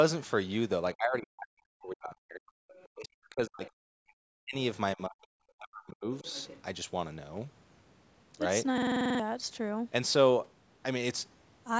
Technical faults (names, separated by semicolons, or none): speech suppressed in double talk; other side's voice leaking through; system hang loop